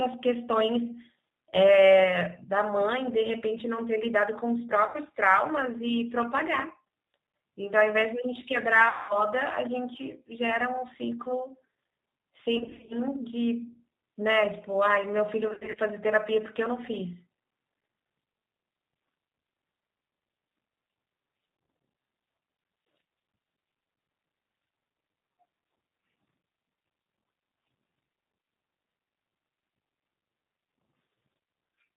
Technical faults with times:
0.00-31.97 G.729 codec
0.00-31.97 sample clock jitter
1.50-1.56 VoIP packet loss concealed by the speech codec
4.87-4.97 VoIP packet loss concealed by the speech codec
8.89-9.18 VoIP packet loss concealed by the speech codec
12.57-12.96 VoIP packet loss concealed by the speech codec
15.48-15.80 VoIP packet loss concealed by the speech codec

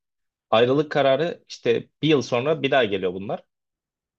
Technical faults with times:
none

